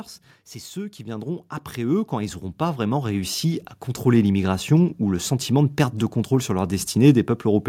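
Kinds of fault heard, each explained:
Automatic gain rising: the automatic gain control judged the incoming level too low and stepped its gain upward, lifting everything it received, not just the voice. In this speech clip the level climbs steadily from about 0.72 s to 5.33 s, roughly four and a half seconds of gradual swell totalling about 13 dB. The background noise floor rises in step with the speech, which is what marks it as a gain change rather than a louder talker.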